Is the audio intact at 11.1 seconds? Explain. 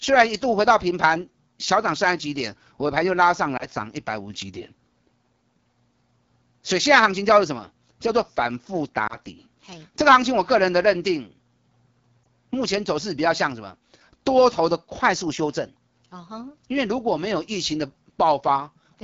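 No. AMR wideband (HD Voice) codec damage runs through the whole speech clip, including 11.1 s. The codec models speech up to 6.4 kHz and fills the top band with shaped noise. Here the rough, raspy texture fits its low 8.85 kbit/s mode.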